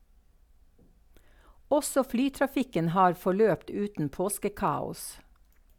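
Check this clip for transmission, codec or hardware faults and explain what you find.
Nothing in this speech recording points to a fault of any kind. There is no event in it that calls for a closer look.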